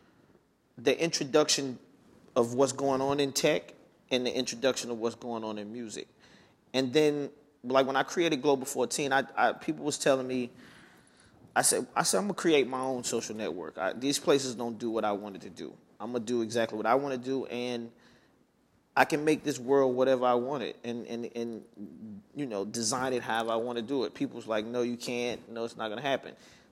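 No technical faults can be heard anywhere in the signal, which stays steady and intact across the whole recording.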